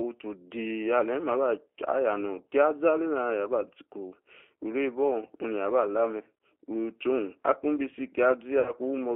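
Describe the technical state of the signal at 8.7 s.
VoIP packet loss concealed by the speech codec runs from 8.60 to 8.72 s. About 60 ms of audio, which fits three lost 20 ms packets, was never received. The decoder filled the gap by repeating its last pitch and filter settings at a falling gain. The result is a brief buzzy tone or coloured noise that fades, and the sound stays weak or distorted as frames resume.

Underneath, the G.729 codec is at work. It limits the band to 300 Hz to 3.4 kHz and rebuilds the signal from a filter and sparse pulses at 8 kbit/s, leaving a plainly rough, synthetic texture.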